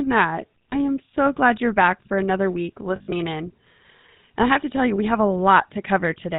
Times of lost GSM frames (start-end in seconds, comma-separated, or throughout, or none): 0.70-0.74, 2.96-3.13, 4.96-4.99